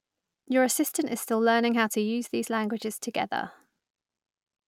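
Nothing goes wrong anywhere in this speech recording, so there's no technical fault to point to at any moment.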